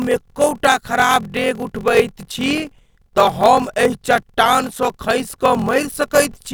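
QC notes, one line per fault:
Throughout, block size mismatch (padded): the speech carries a steady 43.1 Hz buzz, consistent with a 1024-sample read block. Each block is only partly filled and the remainder is zero-padded, so a short silence recurs every block and the speech runs at 0.861 speed at roughly unchanged pitch.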